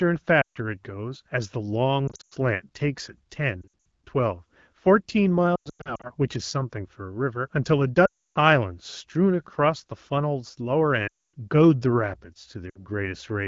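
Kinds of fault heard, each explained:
Lost AMR speech frames: the decoder covers corrupted frames by reusing its last good pitch and vocal tract settings at falling gain, so seven patches between 0.41 and 12.84 s drop quickly toward near silence; spectrograms show frozen harmonics thinning into gaps, waveforms a tapering envelope.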